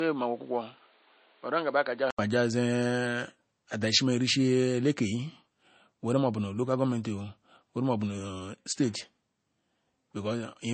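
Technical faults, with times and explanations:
Throughout: low-bitrate audio saved at a high bitrate. The speech sounds thin and swirly, and nothing is present above 8.3 kHz. That cut-off and smearing fit a first MP3 pass at a very low rate, about 32 kbit/s. The file was then likely re-encoded as MP3 at a much higher rate. The second pass keeps the damage but cannot restore the missing top band or the lost detail.
0.00–2.19 s: input switched to a poorer device. The opening speech is dull and boxy, with nothing above 4.7 kHz. It sits about 5 dB lower than the rest and carries background noise about 30 dB below the speech. At 2.19 s an 80 ms silence marks the change, and then the brighter, cleaner sound begins. That points likely to a narrowband microphone or headset profile handing over to the main input.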